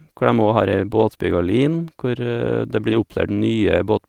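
Speech with two short stretches of lost packets rebuilt from error correction, at 0.99 to 1.01 s and at 2.89 to 2.95 s. Each dropout was replaced by a low-bitrate copy carried in the next packet, so the waveform shows no gap or silence. The rebuilt 20 ms and 40 ms, which fit one and two lost packets, sound briefly rougher and noisier, and on a spectrogram they appear as a smeared, grainier patch.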